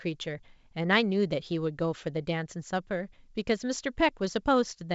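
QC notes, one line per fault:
No faults found; the speech carries the G.722 wideband telephone coding at 64 kbit/s, which leaves at most a faint upper-band hiss, and nothing breaks into the audio.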